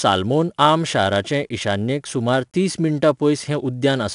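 4-bit ADPCM compression runs throughout this speech clip: coarse 4-bit prediction steps leave plainly audible gritty hiss on loud passages, with nothing above 10.6 kHz, consistent with about 89 kbps.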